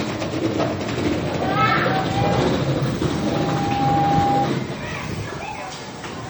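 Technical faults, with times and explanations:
Throughout, MP3 compression: the encoder likely ran short of bits, at a rate that fits roughly 48 kbps, so its hearing model discarded weak frequency lines that then flicker on and off from one frame to the next. The damage is plainly audible as a watery, swirling texture, with metallic chirps on bright, hissy parts and softened attacks. The treble itself still extends to about 20.3 kHz, so the harm lies in the lost detail rather than a cut top end.
3.06 to 4.52 s, loudspeaker feedback squeal: a microphone picked up the loudspeaker it was feeding, and at 803 Hz the round-trip gain went above one, so that frequency kept reinforcing itself. It swells over roughly a second into a steady squeal about 5 dB louder than the surrounding sound. The squeal then stops at 4.52 s, which is consistent with the loop being broken or the gain being lowered.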